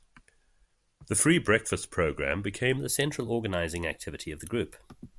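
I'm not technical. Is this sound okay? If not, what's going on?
No. From about 2.78 s to the end, the speech has a wrong sample rate fault. It plays about 1.09 times too fast and sounds about one and a half semitones higher, so voices come out slightly squeaky and rushed. The stretch was most likely recorded at one rate and played back at a faster one, which fits 22,000 versus 24,000 samples per second. You can tell it apart from a simple pitch change because speed and pitch rise together.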